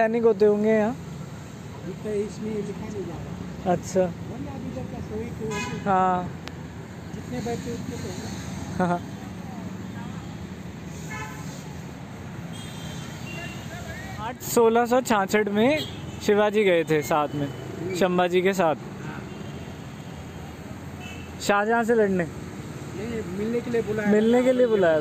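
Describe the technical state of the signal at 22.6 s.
At 22.6 s the signal is intact, with no audible fault at that moment.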